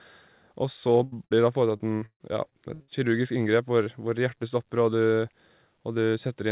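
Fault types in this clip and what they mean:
Burst of packet loss: Speech drops out at 1.04 s and 1.26 s, for about 80 ms and 60 ms. The last sound is held and fades, then speech resumes further on.
Repeated packet loss (robotic sound): From 1.77 to 2.90 s, ten gaps are patched by continuing earlier sound. The longest is 139 ms. Speech turns choppy.
Short concealed packet loss: About 20 ms goes missing at 3.84 to 3.88 s. Continued sound fills the hole. It leaves a brief smear before the real speech returns.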